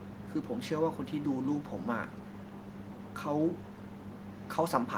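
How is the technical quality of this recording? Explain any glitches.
One glitch stands out: an echo leak from 3.7 to 3.88 s. The far end likely had an echo canceller that failed to remove all of its loudspeaker's output from its microphone, so the speech returns about 0.39 s late as a brief, faint copy, roughly 30 dB down.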